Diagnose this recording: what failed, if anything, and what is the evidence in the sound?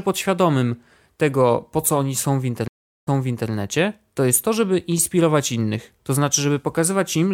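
A stream reconnect failed at the network stage. Speech cuts to silence at 2.68 s for about 0.37 s, then resumes, with the event over by 3.50 s, repeating roughly 0.44 s already heard. The connection dropped, the player started a fresh decoder, and the server resent a burst of earlier audio.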